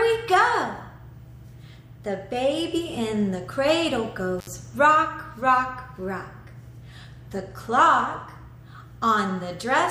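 At 4.39 s the signal drops out abruptly and returns at 4.47 s, a classic intermittent contact. A loose plug or cable conductor momentarily lost connection, breaking the signal path for roughly 69 ms. The break is audible as a short gap framed by crackle at both edges, where the contact opens and recloses unevenly. While the line is open, faint hiss remains in place of the program material.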